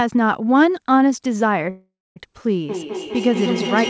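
From 1.70 to 2.18 s, a call audio freeze: packets were likely held up and the jitter buffer ran dry, so the last sound stretches, fades into about 240 ms of silence, and resumes 460 ms late with nothing lost. From 2.69 s to the end, feedback echo between two devices: a second device replays the call into the microphone, so the speech returns roughly every fifth of a second, thinning and ringing, peaking about 4 dB below the speech.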